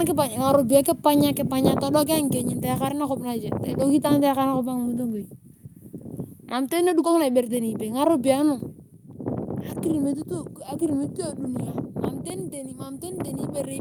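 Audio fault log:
2.04 s and 8.94 s: microphone volume stepped down. The speech and background fall together in a single abrupt step, by about 3 dB and then by about 2 dB. This likely comes from the call software cutting the microphone's input gain after judging it too hot.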